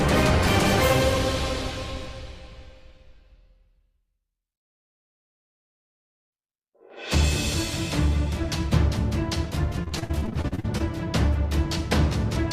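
From 9.83 to 10.81 s there is repeated packet loss, giving a robotic sound. Over a dozen short holes open in that second, the longest about 56 ms. Each hole is patched by stretching the sound just before it. Roughly a third of the stretch is filled this way. The gaps come too close together to recover between them. The result is choppy and robotic, with small pieces of the sound missing.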